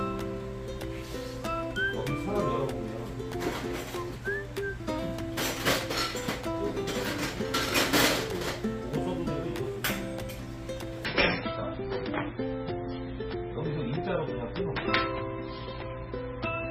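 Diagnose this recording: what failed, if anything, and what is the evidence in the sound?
The failure is at the network stage: an adaptive stream dropping to a lower bitrate. From 11.05 s to the end, the treble abruptly vanishes above 5.6 kHz and coarse codec artefacts appear. That fits a switch to a very low-bitrate MP3 rendition. Unlike packet loss, there is no gap and the degradation persists.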